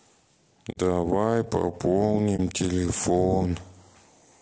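The speech was likely encoded with a low-delay AAC codec such as AAC-ELD at a low bitrate. Its short frames resolve pitch harmonics poorly, so throughout the clip the voice sounds rough and grainy, with noise between harmonics and a thin, synthetic top band, consistent with roughly 32 kbps.

From 0.71 to 0.78 s, AAC frame loss with muting occurs. The decoder zeroed the missing spectrum, leaving a soft-edged 60 ms hole, which fits two lost frames, with the overlapping windows fading the sound out and back in. The same happens at 2.36 s, a 30 ms gap that points to a single lost frame.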